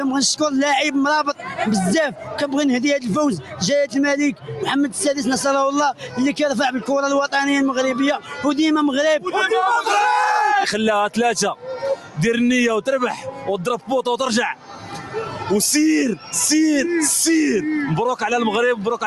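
A noise suppressor applied to music or sounds runs throughout. It treats held tones and tails as noise, so the level pumps by roughly 5 dB. Sound cut by the noise suppressor hits at 1.31–2.35, 3.41–4.5, 5.93–6.17, 8.19–9.27, 11.55–12.17 and 13.16–16.33 s. Sustains sink by about 10 to 11 dB, and decays end early.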